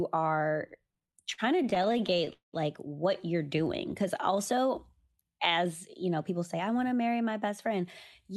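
A speech clip carried over a call path whose Opus coding fits about 64 kbps and rolls off the top end near 12 kHz, with three timing faults. From 0.87 to 2.29 s come repeated stalls (stutter): 25 short gaps, the longest 51 ms, each filled by continuing the last sound because late packets kept draining the jitter buffer. On a spectrogram they show as brief smeared, stretched slices across about a fifth of that span, and nothing is lost, but the speech drags and judders. From 2.33 to 2.55 s the audio halts in what sounds like a call audio freeze. The last sound carries on and fades, with about 130 ms of near-silence, before speech resumes where it stopped, likely because packets were held up long enough to empty the buffer. The waveform shows a 0.2 s hold-then-drop inserted into the flow, with nothing missing. From 4.65 to 6.55 s a jitter buffer speed-up plays the speech at about 106% speed and unchanged pitch as the receiver trims pitch-period pieces, about a tenth of a second in total, to cut excess delay. 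It sounds slightly hurried, and the spectrogram shows syllables compressed in time with their harmonics staying level.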